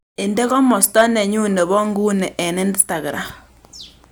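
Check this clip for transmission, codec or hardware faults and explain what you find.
Hard clipping shows up twice. Around 0.83 to 1.02 s the speech overdrives some stage by about 8 dB, so peaks get sliced flat into harsh fuzz; a brief crackle follows at 2.80 s, about 5 dB over.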